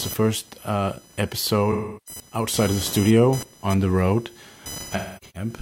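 Computer activity noise runs throughout: a buzz pulsing at roughly 1 kHz, only about 15 dB below the speech, as processor load disturbs the shared audio ground. AAC frame loss with concealment occurs from 1.71 to 2.20 s, where about 0.34 s of lost frames is rebuilt from the previous spectrum and sounds smeared and noisy. It recurs from 4.76 to 5.49 s, with scattered gaps whose longest stretch lasts roughly 0.3 s.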